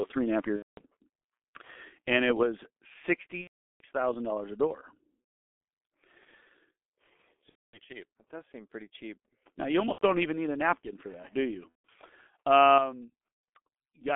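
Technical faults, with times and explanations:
Throughout, G.723.1 codec: The speech is confined to a band of roughly 250 Hz to 3.5 kHz, so it sounds thin and muffled with nothing bright above. The coding damage is heavy. Voices come across hoarse and rough, and consonants smear together. The codec works in coarse 30 ms blocks and adapts its model of the voice slowly, so fast changes in the speech get blurred. The sound fits a bitrate near 6.3 kbit/s.
0.56–0.82, 3.41–3.83, 5.48, 7.49–7.79, 9.92–10.03, 11.69–11.72 and 13.28–13.43 s, VoIP packet loss concealed by the speech codec: The first comes right after "three and a half", and the sixth right after "napkin for that do". Each is a patch of buzzy, stretched tone or coloured noise that fades away. The decoder had no data and kept repeating its last pitch and filter while lowering the gain. The missing stretches are about 210, 390, 390, 240, 90, 150 and 150 ms long. 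Speech stays weak and distorted for a moment after each one, because every frame builds on the last.
12.78 s, microphone volume stepped down: At this point the voice and the background both drop suddenly, by about 7 dB, in a single step. There is no fade. An abrupt, even drop like this is likely the call software cutting the microphone's input volume because it judged the signal too loud.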